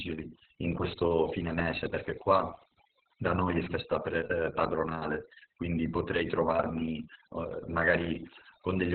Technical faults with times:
0.00-8.94 overdone noise removal
0.00-8.94 Opus voice compression

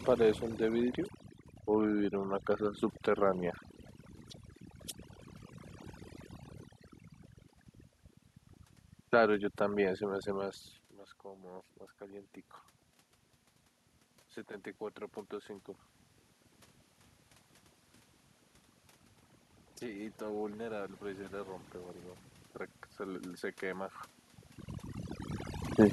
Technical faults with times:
0.00-25.92 overdone noise removal
11.22-12.35 automatic gain rising
19.80-21.60 automatic gain rising

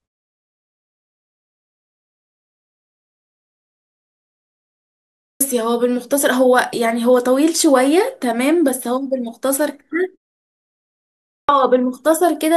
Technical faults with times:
5.27-5.40 clipped start after a pause
11.35-11.49 clipped start after a pause

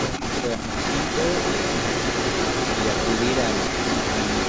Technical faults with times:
0.00-4.48 echo leak
0.41-0.75 speech suppressed in double talk

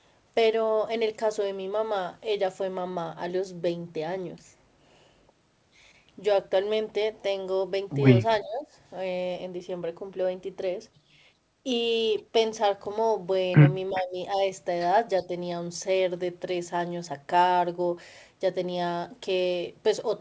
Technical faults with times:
8.31-8.36 echo leak
8.42-8.67 speech suppressed in double talk
13.90-14.18 speech suppressed in double talk

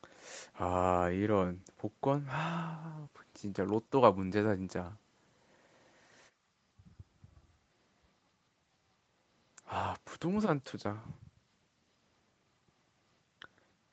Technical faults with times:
none

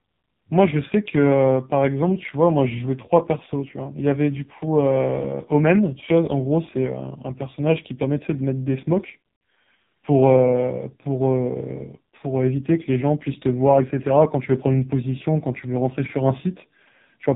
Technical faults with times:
0.00-17.36 AMR narrowband mobile codec

